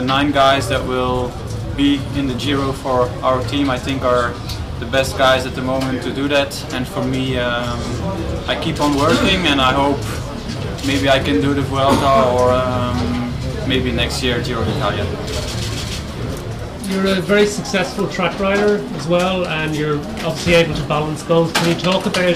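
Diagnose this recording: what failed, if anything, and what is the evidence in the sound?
Hard clipping throughout, at the converter or gain stage before it. Peaks hit about 8 dB too hot and are cut flat. Under one percent of samples clip, giving crackle on loud moments.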